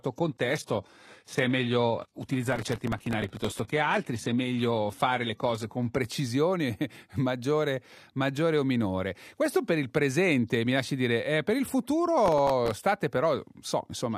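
Speech, opening with an adaptive stream starting at a low bitrate. From 0 to 6.0 s the treble is thin and synthetic, with nothing above 12.3 kHz, and codec artefacts are stronger. At 6.0 s quality jumps up with no gap. That fits a start on a low HE-AAC stream and a step up to AAC-LC near 96 kbit/s. Processor overload crackle appears from 2.52 to 3.69 s and again from 12.26 to 12.76 s. It is a gritty tearing over the speech. Many consecutive deadlines were missed, each leaving a hard-edged repeat of old audio. The grain points to buffers of a few milliseconds.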